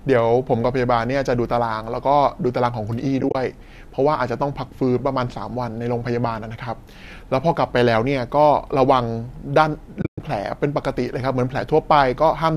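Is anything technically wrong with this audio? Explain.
Yes. The speech, likely carried over low-delay AAC, loses audio in two places to AAC frame loss with muting. Around 3.21 to 3.35 s, about 70 ms of frames drop out, scattered across 140 ms, with the longest run near 30 ms. Around 10.02 to 10.20 s, about 160 ms drop out across 180 ms, including a run near 100 ms. The decoder zeroes each missing frame, and the overlapping windows fade the sound out and back in, leaving soft-edged holes.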